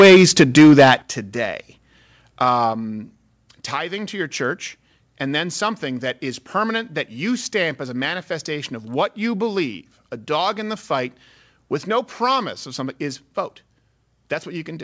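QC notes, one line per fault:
0.00–0.94 s, microphone overload: peaks are flattened about 8 dB past the limit. The loudest syllables crackle harshly, likely from too much input gain.
1.02 s and 2.73 s, microphone volume stepped down: the sound and background drop abruptly, by about 10 dB and then about 4 dB. This is likely automatic gain reacting to the earlier clipping.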